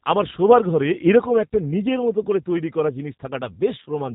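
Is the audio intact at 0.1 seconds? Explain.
No. At 0.1 seconds, as throughout the clip, the speech has passed through a G.729 codec at a rate that fits 8 kbit/s. Instead of carrying the waveform, the coder rebuilds each 10 ms frame from a vocal tract filter, a pitch predictor and a handful of pulses, and discards everything above 3.8 kHz. The result is plainly audible: a muffled, band-limited voice with a rough, slightly synthetic buzz in place of natural texture.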